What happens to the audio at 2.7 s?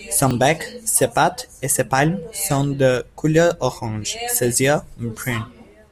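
Nothing goes wrong at 2.7 s: the speech runs through that moment intact, with no dropout, click, distortion or other fault to be heard.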